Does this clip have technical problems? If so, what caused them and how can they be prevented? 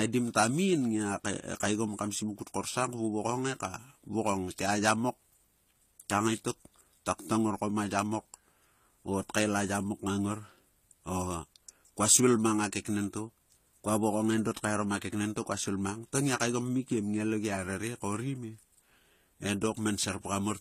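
Yes. Throughout the speech there is a layered quality, with the artefacts of the different codecs heard together, and nothing is present above 14.9 kHz. This is likely transcoding between lossy codecs: the sound points to an AAC-LC encode around 64 kbit/s followed by HE-AAC around 24 kbit/s. The second encoder spent its scarce bits reproducing the first one's artefacts while adding its own. On a spectrogram, the energy stops at a hard ceiling near 14.9 kHz, and the upper bands look patchy. To prevent it, encode once from the original uncompressed source rather than re-encoding an already compressed file.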